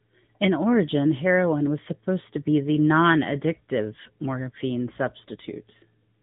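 From start to finish the speech carries the sound of the AMR narrowband mobile codec, the old 2G/3G phone coder, and the damage is plainly audible. Nothing gets through above about 3.8 kHz, so everything sounds boxed-in and telephone-like. The codec rebuilds the voice from a vocal-tract model fed by a handful of pulses per short subframe, which leaves a buzzy, synthetic edge, consistent with a fairly high-rate mode of around 10 kbps.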